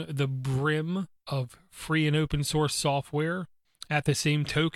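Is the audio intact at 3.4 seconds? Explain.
Yes, at 3.4 seconds the speech plays through intact, with no audible fault at that moment.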